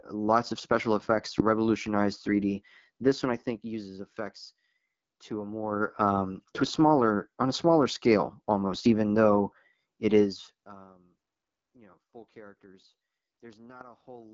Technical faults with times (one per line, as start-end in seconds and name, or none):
0.00-14.33 AMR wideband (HD Voice) codec